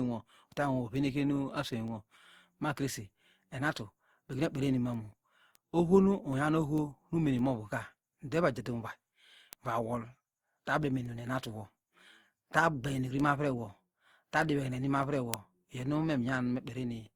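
Across the whole recording, the speech has likely been through repeated lossy coding, a case of generation loss: decoded and re-encoded around seven times with Opus at a rate that points to about 64 kbit/s. Each pass requantises on a shifted frame grid, so the coding noise and spectral gaps stack up. The voice comes across swirly, smeared and hollow, worse than one pass at that rate would give, with blurred consonant attacks, though content still reaches about 20.2 kHz.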